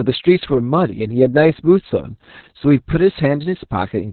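Opus voice compression affects the whole speech clip. Nothing survives above 4.3 kHz, so the sound is cut to narrowband. The SILK coder's coarse excitation leaves speech muffled, hoarse and slightly robotic. The heavy damage fits a bitrate around 6 kbps.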